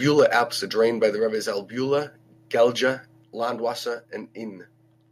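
Right at the start, from 0.06 to 0.42 s, there's microphone overload: the peaks are pushed about 4 dB past the converter's ceiling, so a small fraction of the waveform gets its tops sheared flat. You hear it as a gritty, crackly edge on the loudest bits before "are drained by the". The likely cause is an input level set too high for the mic.

Then the microphone volume steps down three times. The first, at 0.2 s, drops about 2 dB, landing right inside that distorted stretch. The next comes at 1.2 s, just after "are drained by the", and drops about 3 dB. The last, at 3.24 s, drops about 4 dB. Each is an abrupt level drop that hits the voice and background together rather than a smooth fade, and the steps get bigger as the clip goes on. It's likely the call software reacting to the hot input and cutting the device gain in discrete steps.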